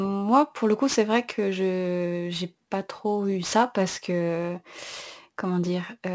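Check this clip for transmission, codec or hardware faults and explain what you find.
Aliasing runs through the whole speech clip. The sound points to a drop from 44.1 kHz to 16 kHz without a low-pass filter first. Energy above 8 kHz folds back to unrelated lower frequencies, roughly 20 dB below the speech. Sibilants turn gritty and metallic.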